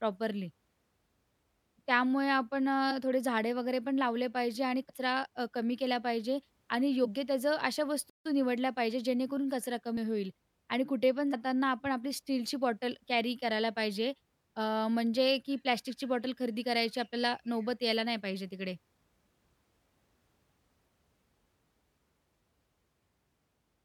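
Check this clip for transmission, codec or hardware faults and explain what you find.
Two kinds of fault are present: compressed frames skipped at five points, and one playback stall.

Compressed frames skipped: at 2.90–2.93 s, 4.88 s, 7.04–7.08 s, 9.96 s and 11.33 s, the decoder did not play whole frames of the compressed stream, either because they were missing or because it rejected them as damaged. The speech jumps ahead by the audio left out: about 20 ms at 2.90 s, roughly a tenth of a second at 4.88 s, and about 70 ms at each of the other three. Each jump is heard as a sudden break in the speech, with a short glitch where the two ends join.

Playback stall: at 8.10–8.25 s the output goes silent for 157 ms in the middle of the speech, then carries on. This is likely because the player ran out of data or its thread was blocked, so nothing reached the output until it recovered. The result is an abrupt gap that sounds like the audio freezing, not like a natural pause.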